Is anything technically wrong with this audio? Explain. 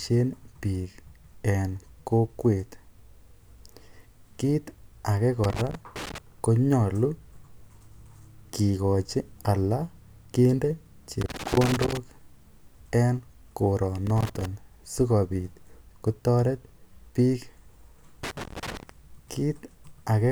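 Yes. Loose connector crackle appears four times: 5.44–6.18 s after "kiit ake", 11.21–11.97 s after "kikochi ala kende", 14.07–14.45 s before "sikobit kotoret biik", and 18.23–18.89 s. A worn contact intermittently breaks the line, chopping the speech into irregular bursts of scratchy crackle.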